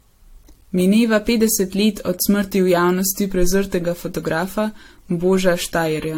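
Generation loss runs through the whole speech clip. The audio sounds swirly and hollow, with smeared attacks and a watery texture beyond what a single lossy pass would leave, and nothing is heard above 16.6 kHz. The likely cause is repeated decoding and re-encoding, around four passes, with a codec that fits AAC-LC at about 64 kbit/s. Each pass quantised the signal again on a shifted frame grid, so its noise and spectral holes stacked up.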